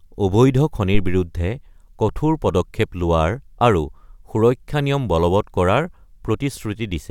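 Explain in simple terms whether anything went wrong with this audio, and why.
Around 0.94 to 1.31 s there is a phantom power thump: a deep bump as the microphone's power switches, fading in under a tenth of a second.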